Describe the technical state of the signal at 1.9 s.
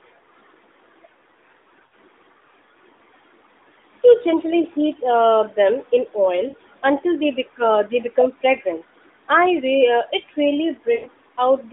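Lost AMR speech frames, from 1.86 to 1.93 s: a gap of about 60 ms, which fits three consecutive 20 ms frames failing their checksum. The narrowband decoder covers the gap by reusing the last good pitch and vocal tract settings while lowering the gain, so the sound is held and stretched, then fades toward silence. When good frames return just after 1.93 s, the voice comes back weak or rough for a moment.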